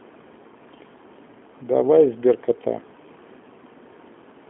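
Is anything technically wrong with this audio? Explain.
Yes. Throughout the speech, the sound carries the marks of the G.729 codec at 8 kbit/s. Each 10 ms frame is rebuilt from a vocal tract filter, a pitch predictor and a few excitation pulses rather than the original waveform, so the speech comes out rough and slightly synthetic. The line band runs roughly 200 Hz to 3.4 kHz, and on a spectrogram everything above about 3.7 kHz is empty, cut off sharply by a flat ceiling. The waveform looks thin, missing its fine high-frequency detail.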